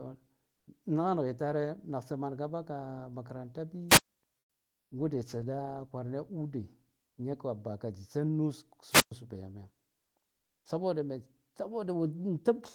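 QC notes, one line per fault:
0.53–0.67 s and 10.37–10.65 s, comfort noise in place of the background: the sender likely stopped transmitting during pauses under Opus discontinuous transmission, so the receiver filled 140 ms and then 280 ms with synthetic noise. The quiet background, sitting about 53 and 51 dB below the loudest sound, turns into a smooth, featureless hiss. The first patch matches the surrounding level within about 1 dB; the second drops about 9 dB.
3.88–4.09 s and 8.90–9.12 s, wireless microphone squelch dropout: the radio link from the FM microphone faded far enough for the receiver's squelch to cut the output. Each event starts with a brief surge of hiss or static, then a hole of near silence lasting about 116 ms and 115 ms respectively, before the signal returns. The two gaps are similar in length.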